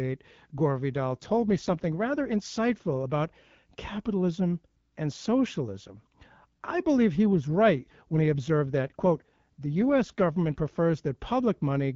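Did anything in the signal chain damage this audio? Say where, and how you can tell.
Yes. AMR rate drops at 0.92 to 2.42 s, just before "about capitalism and socialism", and 7.26 to 10.60 s, after "I believe he". The speech turns rougher and more synthetic, with no gap or narrowing of band, consistent with the network pushing AMR-WB from 12.65 to 8.85 kbit/s to protect a weak link.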